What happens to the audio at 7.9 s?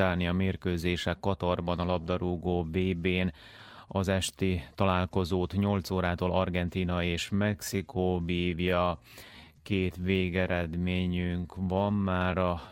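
Software likely slowed the audio to 0.7 times speed from 7.20 s onward while holding pitch; this time-stretched section drags abruptly.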